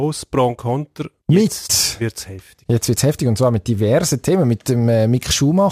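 From start to finish the speech carries sample clock jitter: a timing wobble of a few microseconds moves each sample off its instant, giving an error about 25 dB below the signal that is heard as hiss and roughness rising on loud, bright passages and gone in pauses.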